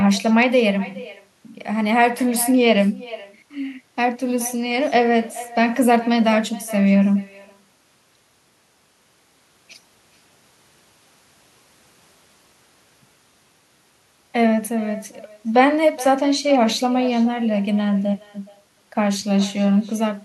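From start to finish, every phrase is trailed by a faint, hollow copy of itself arriving roughly 400 ms later, about 18 dB below the speech, sounding thinner. This is echo with no canceller: the far end is playing the call through a loudspeaker, its microphone picks that sound up again, and nothing strips it out before it returns across the network to the talker.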